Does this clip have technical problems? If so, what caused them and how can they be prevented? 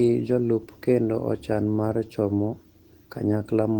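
No, this clip has no technical problems, so there is nothing to trace to a cause or prevent.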